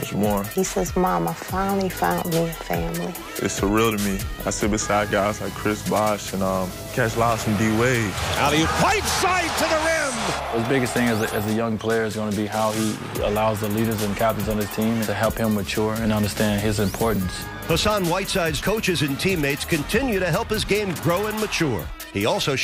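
Nothing in the audio stands out as a technical fault, so there's nothing here to walk through.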